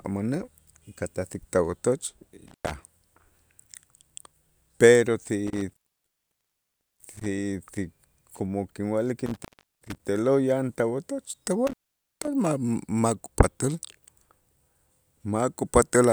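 Intermittent contact breaks the speech four times. A loose connection opens briefly. The sound drops to faint hiss, with crackle at each edge. Cuts fall at 2.47–2.71 s, 5.47–7.26 s, 9.26–9.99 s before "te'lo' yan tawotoch", and 11.67–12.28 s. The gaps last 0.11, 1.27, 0.37 and 0.48 s.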